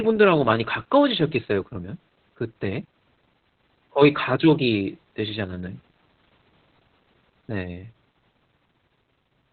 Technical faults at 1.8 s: Opus voice compression

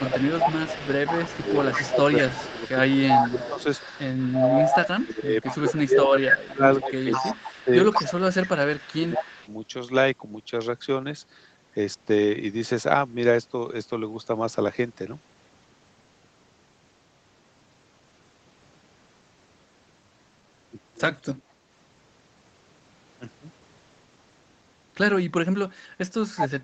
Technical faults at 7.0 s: echo leak; speech suppressed in double talk

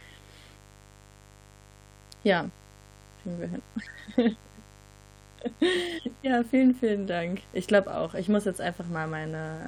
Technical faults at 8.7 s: mains buzz

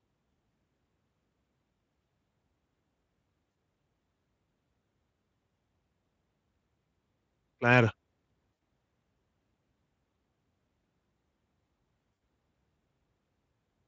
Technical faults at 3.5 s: VoIP packet loss concealed by the speech codec

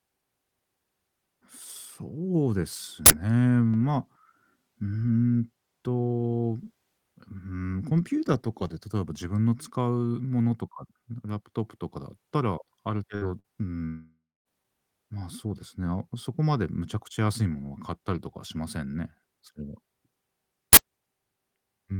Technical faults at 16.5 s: none

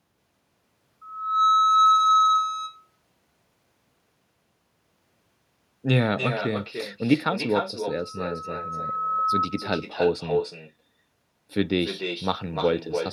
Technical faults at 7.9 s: echo with no canceller; loudspeaker feedback squeal

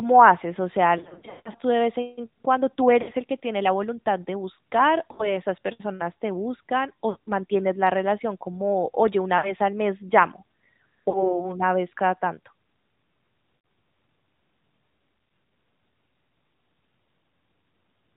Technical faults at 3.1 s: AMR narrowband mobile codec; lost AMR speech frames

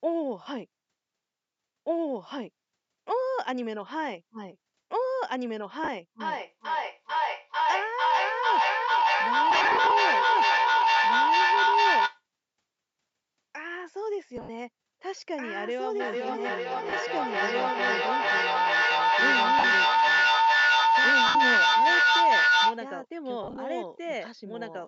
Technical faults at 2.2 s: doubled audio track

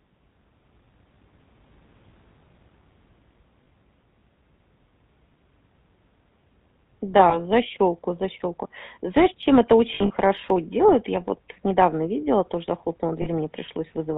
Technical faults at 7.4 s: GSM full-rate codec; lost GSM frames

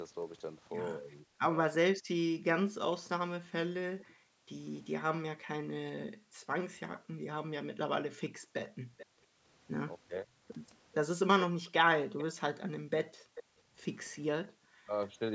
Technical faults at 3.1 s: background gated by the echo canceller

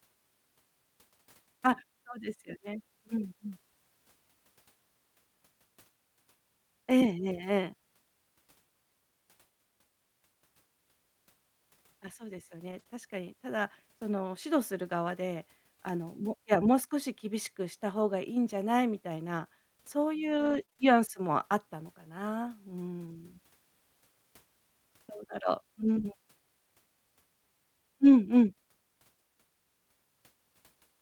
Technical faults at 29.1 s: none

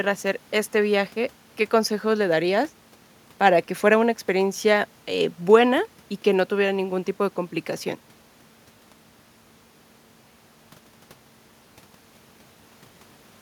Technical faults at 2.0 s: none

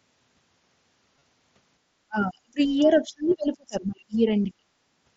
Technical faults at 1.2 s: concealed Bluetooth headset packet loss

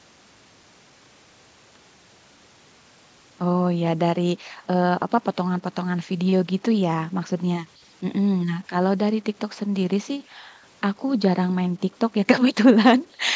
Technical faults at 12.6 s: low bit depth without dither

